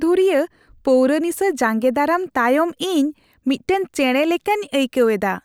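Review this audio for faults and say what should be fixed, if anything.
Nothing stood out on listening to this speech recording, so there is nothing here that needs fixing.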